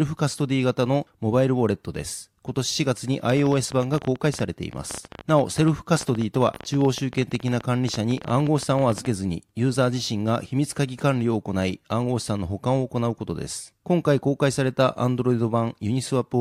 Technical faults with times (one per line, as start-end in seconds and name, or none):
3.32-9.06 train of clicks